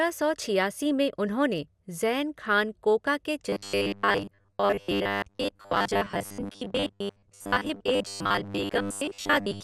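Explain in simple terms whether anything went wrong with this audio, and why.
Two things went wrong here. The whole clip sounds dull and gurgly, likely from MP2 compression squeezing the speech too hard, so the upper sound bands drop out.

From 3.49 s, right after "ज़ैन खान कोका के", to the end, the speech turns into a metallic, robotic sound from repeated short buffers. The likely cause is tiny chunks of about 10 ms being looped instead of fresh audio arriving. That forces a steady 100 Hz buzz, and most of the audio is replaced by repeats.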